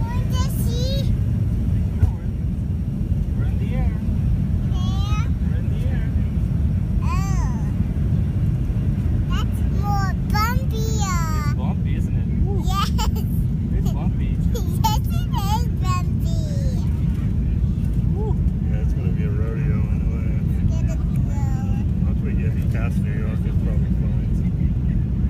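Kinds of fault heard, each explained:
No technical faults can be heard anywhere in this audio. Nothing in it calls for a note or an explanation.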